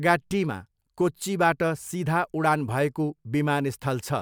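Nothing in this speech clip stands out as a technical fault, so there's nothing to flag here.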